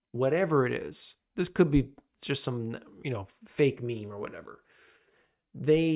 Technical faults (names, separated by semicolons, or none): none